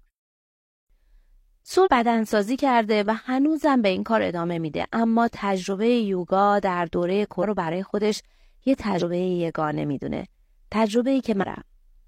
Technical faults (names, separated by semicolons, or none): compressed frames skipped